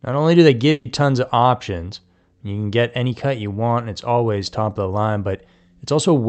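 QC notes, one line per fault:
0.71–0.87 s, burst of packet loss: a short run of consecutive packets never reached the player in time, so about 140 ms of audio is simply gone. The receiver's concealment extended the last decoded sound after "only do they" and faded it as the gap lengthened, producing a brief smeared, dying tail instead of real content. Playback then jumps ahead to "tons of options you", with the material in between skipped over, all within a call path whose Opus coding band-limits the speech to about 8 kHz.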